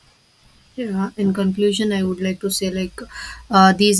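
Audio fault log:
Nothing stood out on listening to this speech clip.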